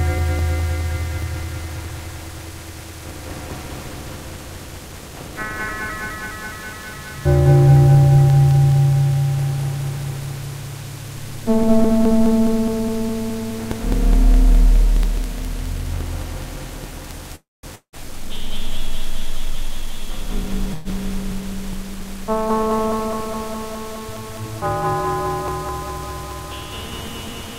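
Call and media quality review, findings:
Call audio freeze, 17.35–17.66 s and 20.74–20.88 s: last sound continued as a fading buzz or hiss, silent for 190 ms in the first, about 115 ms of fill in the second. Likely jitter buffer underrun. Sound resumes where it stopped with nothing missing, unlike a dropout.

Long network dropout, 17.75–17.96 s: fading fill, then 90 ms of silence. Likely packets lost in transit. Unlike the freeze, sound returns further on, with about 180 ms of material never played.

Jitter buffer speed-up, 19.41–20.67 s: sound runs at 110% speed with unchanged pitch. Jitter buffer drained excess delay by cutting short pitch-period pieces, roughly 150 ms in total. No gap or fill, just hurried playback, unlike either freeze or dropout.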